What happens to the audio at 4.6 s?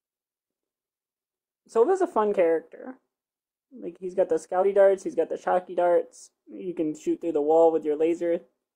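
Damaged data in the compressed stream hits the speech from 4.59 to 4.64 s: corrupted bytes make the decoder misread those frames, lose sync and hunt for the next valid frame header. The result is a brief glitch in the speech.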